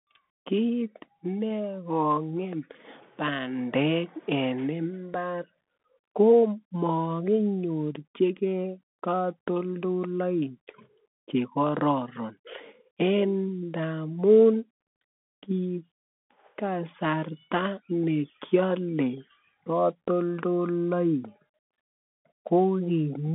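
Bluetooth CVSD headset codec damage runs through this whole speech clip: the band sits at roughly 200 Hz to 3.5 kHz with nothing above 3.8 kHz, and the one-bit slope coding, which fits a 64 kbps link, leaves a granular hiss, scratchy s sounds and distortion where loud high sounds outrun the adaptive step.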